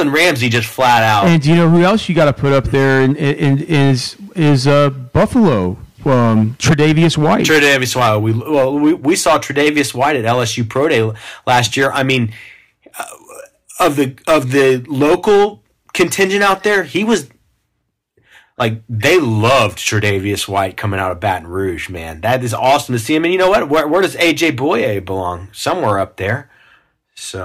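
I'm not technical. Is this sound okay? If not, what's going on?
No. There is hard clipping throughout. The speech was too loud for the recording, so its loudest moments are chopped flat, making a harsh crackly fuzz.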